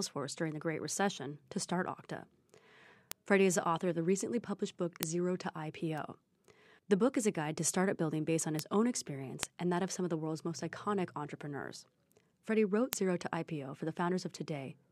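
Single bits flipped in the stored or transmitted speech data, causing bit error spikes where one sample leaps by a power of two and snaps back. Each is a brief, broadband tick at 3.12, 5.03, 5.98, 8.59, 9.43 (three samples) and 12.93 s, peaking from about −27 to −2 dBFS.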